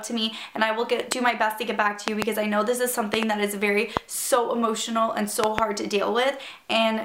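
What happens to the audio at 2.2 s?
A voltage spike, likely a switch or plug transient, hits the signal from 2.08 to 2.24 s, causing a loud pop: two sharp thumps over the continuing sound.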